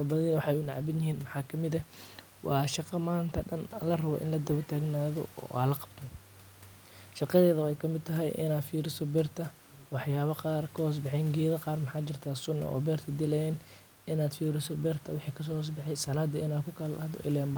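Nothing technically wrong turns up in this speech recording, just a bit of ordinary room noise sitting about 28 dB under the talking, which is simply part of the space it was recorded in.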